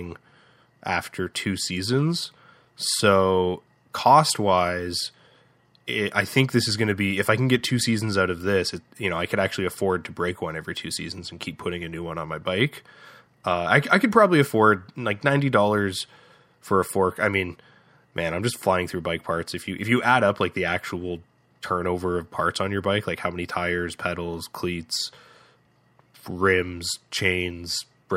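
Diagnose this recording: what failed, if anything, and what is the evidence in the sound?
From 17.3 s to the end, just after "for a fork I", a resampler restarted on every block at the sample-rate conversion stage. Each 50 ms block, converted from 48 kHz to 44.1 kHz, lacks its neighbours' samples, leaving a regular 20 Hz buzz that sounds only under speech, unlike irregular buffer-underrun clicks.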